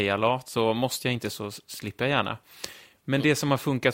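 Nothing goes wrong here at any point; the speech just carries on steadily with no faults to point to.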